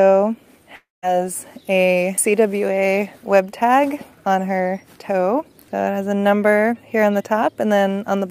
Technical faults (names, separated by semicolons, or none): long network dropout